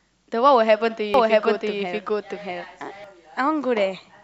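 From 1.14 s to 3.04 s the speech carries a doubled audio track: a second, full-band copy runs roughly 0.7 s behind the original at about the same loudness, so two overlapping streams are heard together. It likely comes from a slower capture path or an edit holding two offset copies. The copy is dry, with no decay, and cuts in and out abruptly. On a spectrogram, each speech pattern repeats about 0.7 s later; the waveform looks denser throughout that span.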